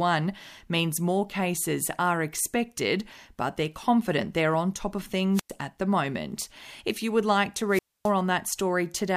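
At 5.33 s, after "they're on top of", there's a wireless microphone squelch dropout: the FM signal fades, hiss swells, then about 100 ms of near silence before "at the moment". It happens again at 7.69 s after "you would like to", with a longer 260 ms hole, recovering by 8.12 s.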